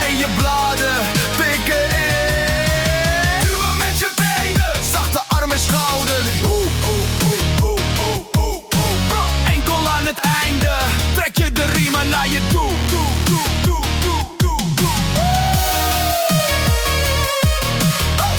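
No technical faults can be heard anywhere in the audio. Nothing at any point suggests a problem in how the sound was captured, processed or delivered.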